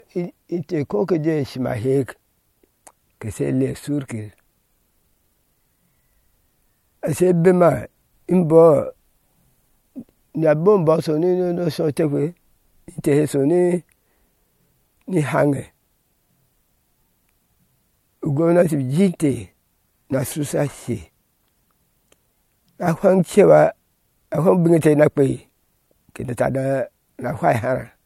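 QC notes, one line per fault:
Throughout: low-bitrate audio saved at a high bitrate. The speech has nothing above 16.6 kHz and carries a swirly, smeared edge, which points to a likely earlier MP3 pass at around 64 kbit/s, re-saved at a much higher MP3 rate that can't restore what was stripped out.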